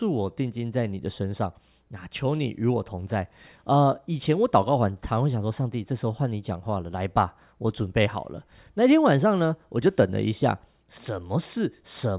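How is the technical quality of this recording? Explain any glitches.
No glitches turn up anywhere in this speech recording. There is nothing to explain, because no technical fault can be heard at any point.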